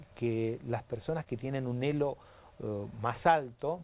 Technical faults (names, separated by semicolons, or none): short concealed packet loss